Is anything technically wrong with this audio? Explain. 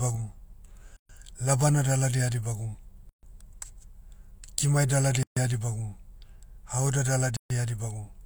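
Yes. The speech was encoded in separate pieces about 2 s apart and joined without trimming each encoder run's start-up delay and final-frame padding. This causes a gap at a join of encoded pieces. Gaps of about 128 to 136 ms open at 0.97–1.09 s (just before "labana daladi eha dibagum"), 3.09–3.23 s (right after that phrase), 5.23–5.37 s (between "kimai daladi" and "eha dibagum") and 7.37–7.50 s. Each has smeared edges, and the speech then carries on where it stopped.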